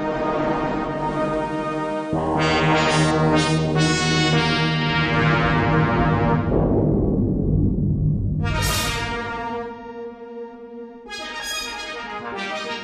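Digital radio blending to analogue, 0.83 to 4.96 s: reception fell back, cross-fading over 0.35 s to FM, adding hiss about 35 dB down and an about 1 dB level shift.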